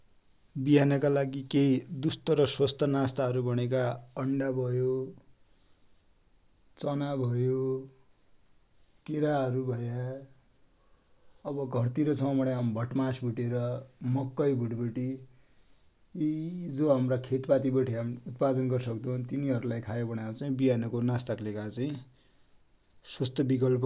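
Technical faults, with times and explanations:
Nothing technical to flag here; this speech recording comes across without any audible problems.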